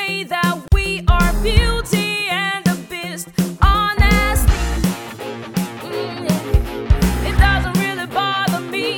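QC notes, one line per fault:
0.68–0.72 s, gap at a join of encoded pieces: continuous sound stops for about 41 ms and then picks up exactly where it left off, so nothing is lost, only held apart. Two separately encoded pieces were butted together with the encoder's start-up delay and last-frame padding left in, which inserts this short silence. Its edges are smeared by the codec, unlike a dropout, where the missing stretch of sound is simply gone.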